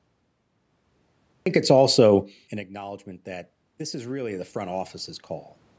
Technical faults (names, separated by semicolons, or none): cut-off start; automatic gain rising